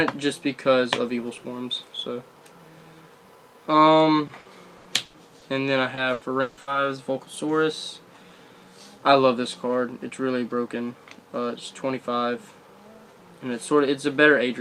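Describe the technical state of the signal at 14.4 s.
Nothing at 14.4 s indicates a fault; the signal is intact at that moment.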